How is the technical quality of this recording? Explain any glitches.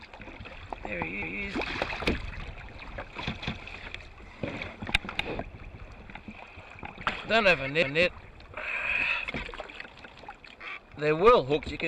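The recording has audible glitches. At 1.22, 3.42 and 7.82 s, a 200 ms stretch of sound repeats as a brief stutter. These are overlapping chunks: the audio was handled in 2.0 s blocks, and each block began before the previous one finished, so the joins played twice.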